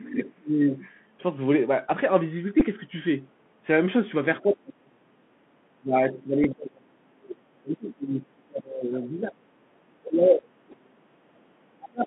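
The whole clip runs through a Bluetooth CVSD headset codec at 64 kbps, so everything sits in a narrow phone band of about 150 Hz to 3.4 kHz. The damage is plain: sibilants come out scratchy, louder bright moments distort, and a grainy hiss rides under the speech.

From the start to 0.83 s the speech is ducked by about 20 dB. That is speech suppressed in double talk, most likely an echo canceller pulling the talker down while the far end is also speaking.

At 2.60 to 2.62 s there's a Bluetooth headset packet repeat. About 11 ms of audio got replaced by replayed packet data, which fits three 3.75 ms packets. You hear a quick buzzy tick rather than a sustained tone.

The same ducking comes back at 4.43 to 5.31 s, dipping about 35 dB, and again across 5.75 to 9.52 s at about 30 dB. Inside that stretch, at 6.44 s, there's a shorter packet repeat of about 7.5 ms, enough for two packets.

The suppression hits again from 10.02 to 11.05 s at about 30 dB. 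Within it, 10.71 to 10.73 s brings another 11 ms repeat tick. A final dip of about 30 dB starts at 11.78 s and carries to the end.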